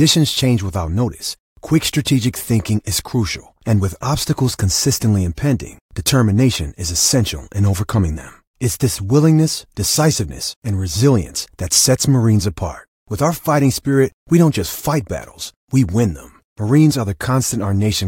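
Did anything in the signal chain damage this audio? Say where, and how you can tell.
No, nothing in the signal chain damaged this audio.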